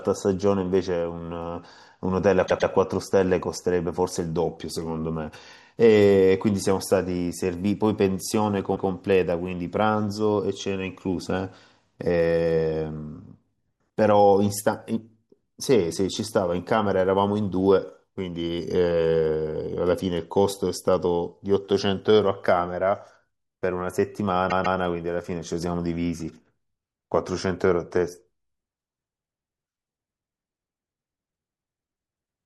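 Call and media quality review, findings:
Repeated frames, speech stutters at 2.46 to 2.70 s (120 ms block, two extra plays), 8.75 to 8.89 s (144 ms, one extra) and 24.49 to 24.78 s (144 ms, two extra). The decoder replayed the same compressed-frame run, adding 240, 144 and 288 ms. It shows as identical copied spectrogram/waveform segments.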